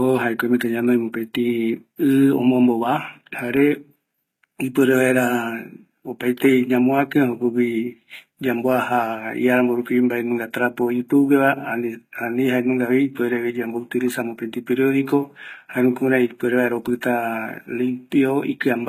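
From start to finish, the speech carries plainly audible codec damage, most likely HE-AAC compression at a bitrate around 20 kbps. The treble stays bright, but it has been synthesised from lower bands rather than coded, so s sounds come out gritty, metallic or lispy, with harmonics that fail to line up above the crossover. That artificial brightness sets it apart from ordinary low-bitrate coding, which would simply cut the treble and sound dull.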